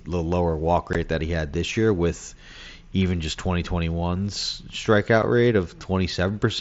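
At 0.93 s and again at 5.22 s the speech is punctured by unconcealed Bluetooth headset packet loss: audio between headset and phone never arrived and nothing was patched in, leaving hard-edged silences of about 15 ms and 7.5 ms, which fit two lost frames and one. Unlike concealed loss, nothing is smeared or repeated across the gap. The sound simply stops and restarts, while the mSBC wideband link around it carries its light graininness.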